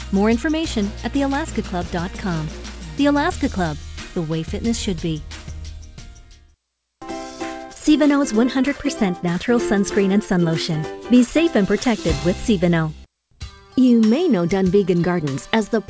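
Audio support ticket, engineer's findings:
No faults found. G.722 call path, 8 kHz ceiling.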